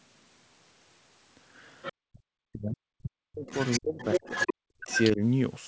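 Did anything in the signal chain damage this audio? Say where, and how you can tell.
Yes. There's other side's voice leaking through, and it sits at the call-processing stage. First there's a brief scrap of a second voice at 1.82–1.93 s, about 15 dB under the main talker. Then a much longer stretch runs from 3.47 to 5.1 s at only about 5 dB down, so it's nearly as loud as the talker. The likely cause is the far end playing on the talker's loudspeaker and getting back into the mic, with the echo canceller not scrubbing it all out.

There's also speech suppressed in double talk, spread over 2.07 to 5.21 s and overlapping that long leak. The talker's level keeps ducking in pieces, with the deepest dips somewhere around 40 dB, and those dropouts add up to roughly a second and a half. This is likely the echo canceller again. With both sides talking at once it couldn't separate the near voice from the echo, so it clamped down on everything, and the talker got turned down.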